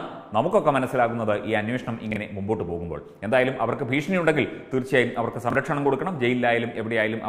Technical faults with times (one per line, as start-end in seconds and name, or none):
2.11-2.16 chunks out of order
5.50-5.55 chunks out of order